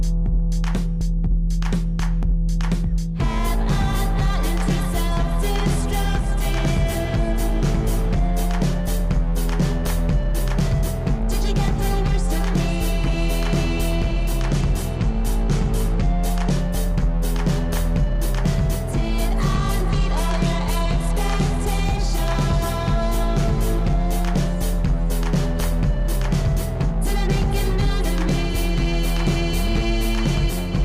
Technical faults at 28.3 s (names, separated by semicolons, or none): none